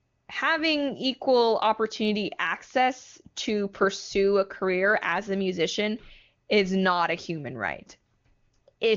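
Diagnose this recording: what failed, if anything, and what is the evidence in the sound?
Nothing failed: the speech passes through the AMR wideband (HD Voice) codec at its top rate of 23.85 kbit/s, and nothing in the sound points to a fault at any stage of the chain.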